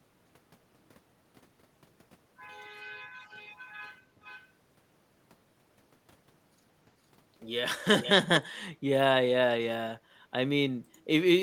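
A loudspeaker-side echo canceller likely let speech slip back, so echo leak follows: faint copies 455 ms late at 3.25–3.73 and 4.23–4.48 s, louder ones at 8.01–8.11 s and 8.35–8.41 s (295 ms late).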